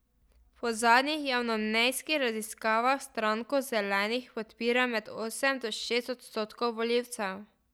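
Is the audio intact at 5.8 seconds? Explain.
Yes, the speech at 5.8 seconds plays through intact, with no audible fault at that moment.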